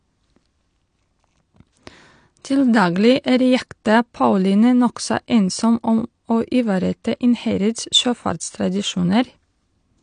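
From start to finish the speech is dull, with nothing above 9.8 kHz, and sibilants have a smeared, fizzy, warbling texture. This is likely AAC compression, with AAC-LC quantising each frame so coarsely that the spectrum is left with holes, which fits a bitrate around 32 kbps.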